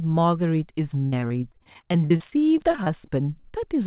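Speech heard over a narrowband call line, with nothing above 4 kHz, which points to G.711. From 1.06 s to 3.56 s there's repeated packet loss, giving a robotic sound: about twenty dropouts, the longest 60 ms, each papered over by stretching the last bit of audio before the next one hits. Close to a fifth of that stretch is patched-in sound, which gives it the choppy texture.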